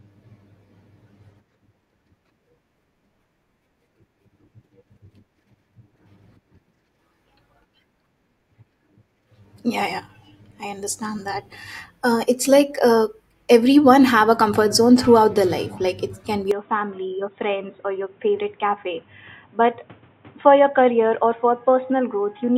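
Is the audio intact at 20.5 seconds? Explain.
No. From 16.51 s to the end, speech loses everything above 3.8 kHz, drops about 5 dB, and gains a new noise floor: likely an input switched to a poorer device. Unlike a plain filter, tone, level and noise change together.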